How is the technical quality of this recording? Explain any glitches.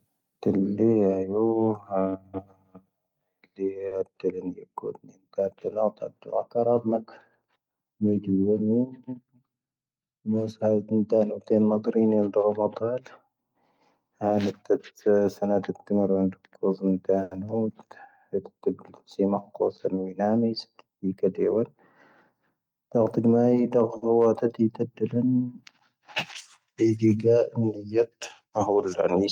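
The speech has five network-timing glitches of two kinds.

At 3.87 s, 17.23 s and 23.97 s there is a short stall from a late packet. The jitter buffer ran dry, so the receiver stretched the last sound for about 40, 80 and 50 ms until the packet arrived. The sound briefly hangs with a faint buzz or dip. Unlike packet loss, nothing is skipped afterwards.

From 8.99 to 9.32 s and from 20.96 to 21.76 s comes a jitter buffer speed-up. To shed excess delay, the receiver cut out a few tens of milliseconds in tiny pitch-period pieces. The speech runs at about 110% and then 106% speed, hurried but at unchanged pitch, unlike a sample-rate error.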